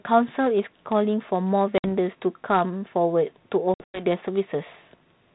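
Packet loss on an ADPCM call breaks the speech twice. At 1.78 s a few packets go missing, about 60 ms in all, and from 3.74 to 4.05 s several more drop out, 160 ms scattered over 200 ms with a longest gap of 100 ms. Each hole is hard-edged silence. The decoder's predictor and step size then no longer match the sender's, so speech resumes with brief, slight distortion under the light coding damage of the telephone-band ADPCM coding.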